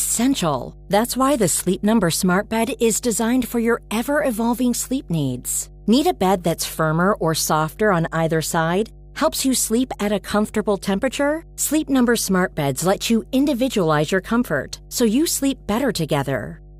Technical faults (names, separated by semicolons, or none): mains hum